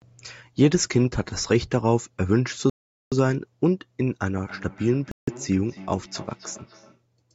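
At 2.70 s the speech drops to silence for 0.42 s and resumes at 3.12 s, a Bluetooth stall likely caused by delayed packets draining the headphones' buffer. The waveform shows a flat gap, and the spectrogram shows a clean vertical blank band.

From 4.39 s to 7.02 s a feedback echo between two devices appears. Speech from one device is picked up by the other's microphone and sent back, so each word repeats about a third of a second later, thinner and ringing. The echo peaks at about 20 dB below the speech. On a spectrogram, fainter copies of each word trail behind it at evenly spaced intervals.

Inside that stretch, a second Bluetooth stall silences the audio for 0.16 s, from 5.11 s to 5.28 s. It shows as another short empty strip on the spectrogram.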